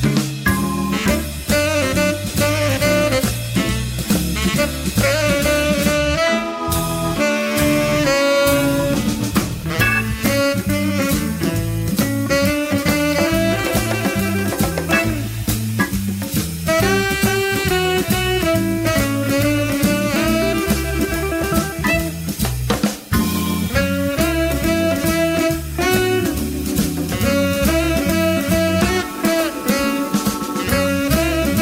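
Nothing here stands out as a technical problem; the audio just runs along without any glitch or defect worth pointing to.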